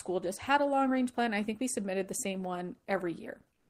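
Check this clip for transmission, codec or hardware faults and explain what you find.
One fault, at the very end. From 3.53 s to 3.69 s, the last 0.17 s or so, comfort noise replaces the background: its natural detail gives way to a steady, featureless hiss, about 2 dB quieter and sitting about 45 dB below the loudest speech. The likely cause is discontinuous transmission: the sender stopped transmitting during the pause, and the receiver generated shaped synthetic noise instead.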